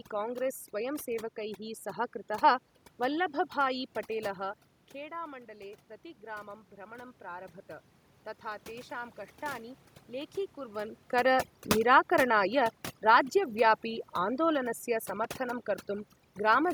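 Right from the start there's overdone noise removal on the whole clip. The room noise behind the speech has been pushed down and broken up into little twinkling specks, and the quiet edges of the voice got dragged down with it.

Around 4.5 s the talker seems to lean back and the level drops by about 14 dB. From 4.92 to 7.58 s you hear the automatic gain rising to compensate, bringing voice and background up together by about 5 dB in a slow swell.

Near 10.5 s the talker moves again, and from 11.15 to 14.78 s there's automatic gain falling. The AGC eases its gain down by about 4 dB, and you can hear the voice and the background sink together over those few seconds.

Right near the end, from 15.24 to 15.35 s, there's a short burst of loose connector crackle. A worn or dirty contact is making and breaking, chopping the signal into an irregular scratchy crackle.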